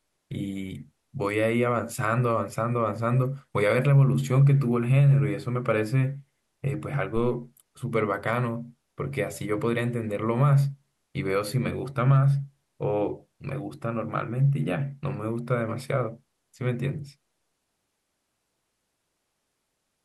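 At 7.16 s a phantom power thump interrupts the speech and lasts until about 7.39 s. A supply voltage switched on or off on the live input, and that sudden DC step passed through the coupling capacitors as a low, dull thud peaking at about -23 dBFS and dying away with a 52 ms decay. On the waveform it shows as a single lopsided swing that settles back to the baseline. The spectrogram shows a brief band of energy at the bottom of the frequency range.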